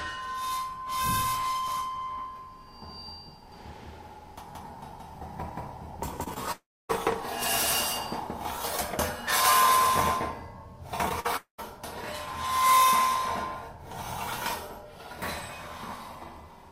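The audio carries a doubled audio track from 3.52 to 8.56 s. A full-band copy about as loud as the original trails it by about a fifth of a second. It has no room colour and starts and stops abruptly. A second capture path or a misaligned edit is the likely cause. Short concealed packet loss occurs at 6.23, 6.34, 11.09 and 11.20 s. The first three gaps each lost 20 ms, and the last lost 40 ms. The receiver extended the preceding sound to cover each gap. These gaps are heard as brief smears or wobbles. A long network dropout runs from 6.52 to 6.91 s, about 380 ms of audio lost, and from 11.36 to 11.60 s, about 220 ms lost. Each begins with a fading continuation of the last sound. Silence then follows, for about 280 ms and 120 ms respectively. The likely cause is a stall in network delivery.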